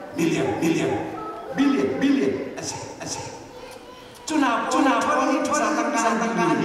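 A doubled audio track runs throughout: a second full-band copy, about as loud as the original, trails it by roughly 400 ms, likely from a slower capture path or two copies held out of step. Unlike echo or reverb, the repeat has no decay and no room colour.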